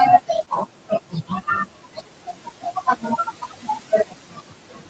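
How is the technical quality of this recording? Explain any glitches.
The recording is held back mainly by an over-eager noise suppressor, with two brief packet-loss glitches near the start. The call ran over Opus at 40 kbps, which limits the audio to about 8 kHz, and room noise sits about 20 dB below the speech.

Speech cut by the noise suppressor, from 0.22 to 1.47 s, 1.66 to 3.02 s and 3.25 s to the end: the suppressor mistook parts of the speech for background and pulled them down by about 12 to 13 dB. Roughly half a second of the first span and about a second of the second are affected, so endings and soft consonants sound swallowed and faint.

Lost packet rebuilt from error correction, 0.37 to 0.43 s: two packets never arrived, and the decoder played the low-bitrate copies carried in the following packets. That covers 40 ms with no gap, but those frames sound rougher and noisier than the surrounding audio.

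Short concealed packet loss, 0.45 to 0.49 s: 20 ms of audio was missing, and the receiver filled 13 ms of it by extending the previous sound before blending back into the real signal. The result is a brief smear or wobble right after the rebuilt section.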